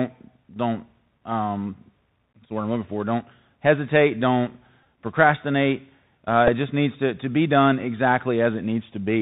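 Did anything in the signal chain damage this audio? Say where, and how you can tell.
Yes. Bluetooth CVSD headset codec damage runs through the whole clip, from start to end, at the codec stage. The speech is hard band-limited with nothing above 4 kHz, a granular hiss sits under it, sibilants come out scratchy, and loud bright passages distort. That fits a 64 kbps one-bit delta coder: each sample only steps up or down, with an adapting step size. When the signal rises faster than the step can follow, the output lags behind the waveform, which is slope-overload distortion.

Bluetooth headset packet repeated errors occur at 4.84 s and at 6.47 s, the second just before "it just needs to". These come from the wireless link between headset and phone. Each is a short buzz near 267 Hz rather than a single tick. The first covers about 15 ms, pointing to roughly four lost voice packets. The second covers about 7.5 ms, roughly two. 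When packets drop, the chip re-decodes the previous packet's bits, briefly repeating a 3.75 ms fragment instead of the real audio.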